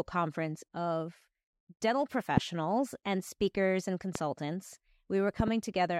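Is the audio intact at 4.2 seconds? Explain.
No. A loud pop hits from 4.15 to 4.18 s, just after "and speakers and", peaking well above the speech. It is likely a sudden voltage pulse, such as from a plug or switch.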